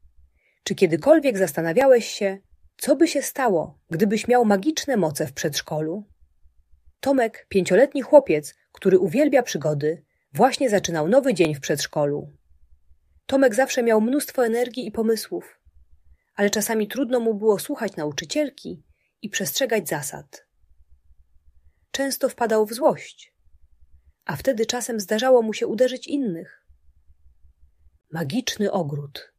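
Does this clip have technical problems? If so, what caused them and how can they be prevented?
Yes. Three sharp single clicks sound at 1.81, 3.93 and 11.45 s. Each is likely a case of dropped samples, where about 0.7 ms of the stream goes missing and the waveform jumps abruptly to a later value. Keeping buffers large enough and the capture chain free of overloads prevents it.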